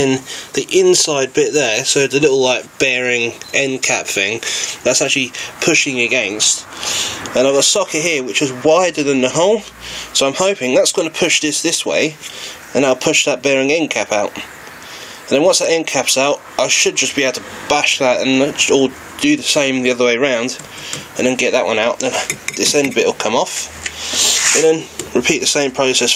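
Gain pumping runs through the whole clip, a level swing of around 15 dB. The likely cause is input gain set far too high, with a fast limiter or compressor clamping down on every peak. On a waveform the envelope looks flattened, peaks pinned at one height.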